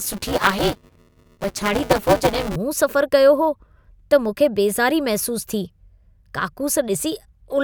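A robotic 200 Hz buzz rides the speech from 0.0 to 2.56 s: buffer tearing, with around a third of each 5 ms period replaying audio about 10 ms old.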